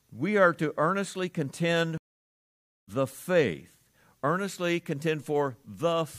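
At 1.98 s the speech drops out for about 0.9 s, until 2.89 s. This is a stream reconnect. The connection broke and the player restarted its decoder mid-stream. When sound returns, it has jumped ahead by roughly a second, so speech is missing.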